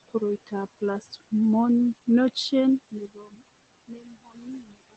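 Speech recorded over steady room noise sitting about 19 dB below the voice, and a noise suppressor is working on it throughout the clip. Noise suppressor artifacts are audible across the whole file: the background is pulled down by about 16 dB in the gaps and comes back up under each phrase, so the floor pumps with the speech. The suppressor cuts frame by frame in whichever bands it judges to be noise. In three places the suppressor also mistakes speech for noise and cuts it along with the background. From 1.01 to 1.32 s about a tenth of a second of sound is pulled down by up to about 15 dB. From 3.14 to 3.41 s roughly a third of a second drops by up to about 14 dB. From 3.88 to 4.75 s most of that stretch is pulled down, by up to about 18 dB. These quieter portions sound swallowed and faint against the surrounding speech.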